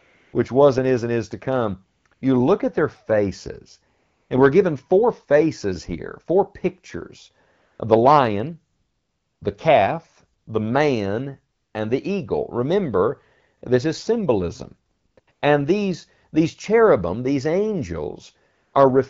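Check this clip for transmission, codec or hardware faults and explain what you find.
Yes, there's one recurring problem, AMR comfort noise, in fourteen pauses between 0.0 and 18.7 s, lasting 40 to 680 ms. The phone stopped sending speech and the receiver inserted smooth synthetic noise. You can hear it flicker in and out, for example right after "and is to come" around 2.0 s.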